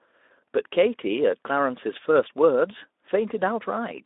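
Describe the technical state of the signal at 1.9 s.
At 1.9 s the speech is intact, with no fault at that moment, only the narrow telephone-like band of the Speex-coded line.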